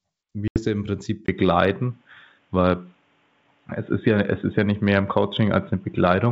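At 0.48 s a packet loss on an ADPCM call cuts a hard-edged hole of about 80 ms, roughly four packets, into the speech until 0.59 s. Because the decoder's predictor and step size have drifted from the sender's, the speech resumes with brief, slight distortion.

From 1.26 s to the end, the sound turns dull and boxy after a 20 ms silence, with nothing above 3.8 kHz, a level shift of about 5 dB and new background noise about 45 dB down. This is likely an input switched to a poorer device.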